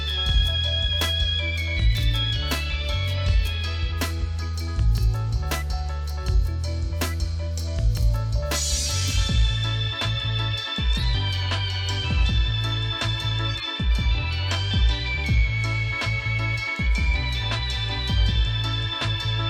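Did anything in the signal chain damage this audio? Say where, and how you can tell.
Yes: corrupt frames were decoded at the codec stage, at 8.75–8.84 s, 10.93–11.10 s and 13.49–13.63 s. Each is a brief chirp or noise burst peaking at roughly -10 to -15 dBFS and lasting a few frames. Flipped bits misread gains or codes, misplacing energy in frequency.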